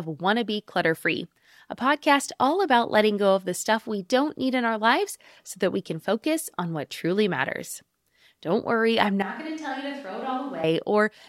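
At 9.23 s, after "worry I'm", the speech abruptly turns roomy and hollow, thin in the bass and about 10 dB quieter, likely a switch to a distant microphone. The waveform shrinks and noise fills its gaps, while the spectrogram loses low end and smears, until 10.64 s.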